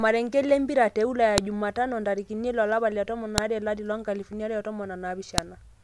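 Speech, with sharp, loud clicks at 1.38, 3.38 and 5.38 seconds. They come exactly 2 seconds apart, regardless of the talking. This is a file header played as audio. Two-second WAV pieces were joined with their header bytes intact, and those bytes sound as a snap.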